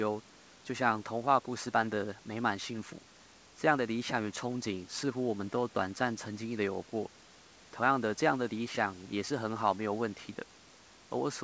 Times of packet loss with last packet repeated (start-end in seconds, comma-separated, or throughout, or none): none